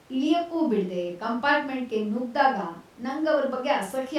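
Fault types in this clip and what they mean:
No faults can be heard.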